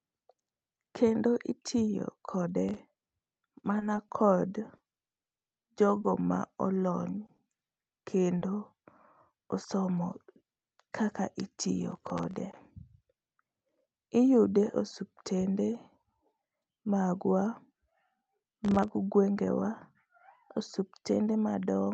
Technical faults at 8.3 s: scattered short gaps

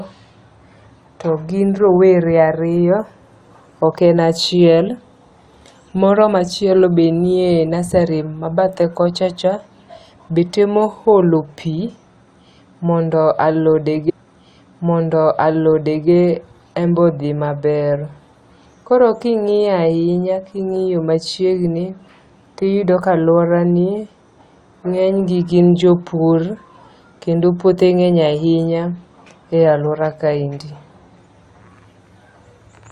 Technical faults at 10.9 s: none

